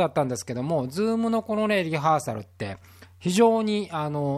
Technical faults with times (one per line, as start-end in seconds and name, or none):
none